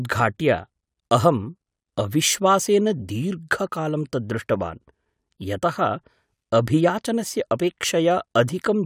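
No technical faults can be heard in this recording.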